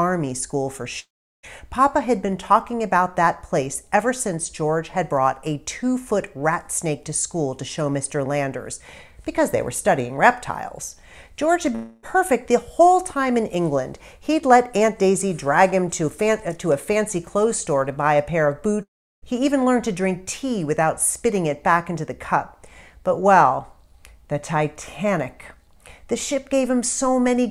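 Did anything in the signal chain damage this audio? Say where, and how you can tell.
Yes. Long network dropouts at 0.99 to 1.46 s, 11.75 to 12.06 s and 18.83 to 19.25 s point to the network stage, likely a transport outage. In each gap the receiver stretches the last sound into a fading buzz. In the first and third, about 440 ms and 400 ms go missing, and that fill dies into silence for roughly a third of a second. The 280 ms middle gap stays concealed throughout. The audio then resumes further on, with the lost portion gone.

Dropped samples produce single sharp clicks at 2.32 s and 15.21 s, seen as thin vertical lines across the spectrum. Only a handful of samples, well under a millisecond, vanish each time, so no sound is lost. The waveform simply jumps to a later value and leaves a discontinuity. That points to the driver or buffer stage, likely a brief under-run or misaligned buffer handoff rather than anything in the network path.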